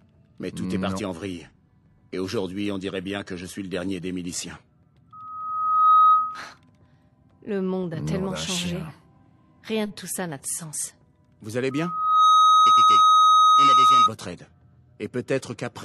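A piercing 1.3 kHz tone swells within about 0.7 s the first time and half a second the second time to sit roughly 15 dB above the audio, from 5.1 to 6.5 s and again from 11.7 to 14.1 s. This is loudspeaker feedback squeal: the microphone re-amplifies its own loudspeaker until that frequency runs away.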